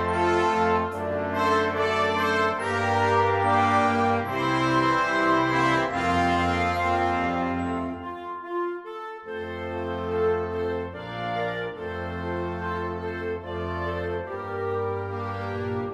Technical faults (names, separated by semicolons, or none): none